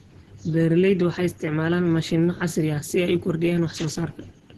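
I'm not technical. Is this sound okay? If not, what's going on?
No. The speech sounds muffled, hoarse and grainy throughout, with nothing above about 12 kHz, most likely from heavy Opus compression squeezing the sound into very little data.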